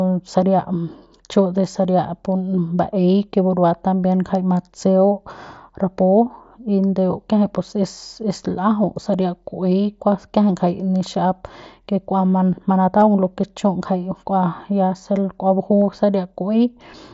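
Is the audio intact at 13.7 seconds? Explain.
Yes, the audio is intact at 13.7 seconds, with no fault present at that moment.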